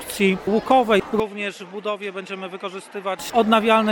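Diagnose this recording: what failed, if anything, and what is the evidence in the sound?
From 1.20 to 3.19 s the sound turns duller, with nothing above 11.5 kHz, drops to roughly 10 dB quieter, and gains a faint new noise floor, with no gap at the changeover. This points to the driver stage, likely an input switched to a poorer device and back.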